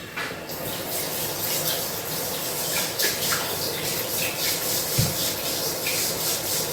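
Throughout, the audio carries layered smearing and a metallic swirl, likely from transcoding between lossy codecs: a Vorbis-like encode at moderate rate, then a lower-rate Opus pass. On a spectrogram, blurred, blocky high bands persist, with content extending to 20 kHz.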